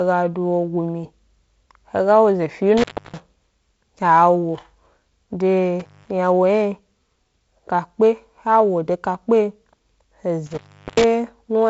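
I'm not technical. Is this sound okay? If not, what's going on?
No. The speech cuts out three times, at 2.77 to 3.20, 5.80 to 6.10 and 10.46 to 11.04 seconds. That is an intermittent contact, a loose cable or plug briefly opening. Unlike a network dropout, each gap has crackle at its edges and faint hiss inside.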